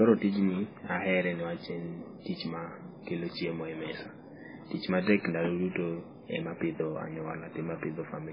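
Speech that carries heavy MP3 compression damage from start to finish. Nothing comes through above about 5.3 kHz, so the treble is simply gone and s sounds lose their edge. Quieter detail sounds watery and swirly, flickering in and out as the encoder drops weak frequency lines frame by frame, and attacks come out smeared. That combination of a hard top cut and unstable fine detail likely points to a very low bitrate, around 16 kbps.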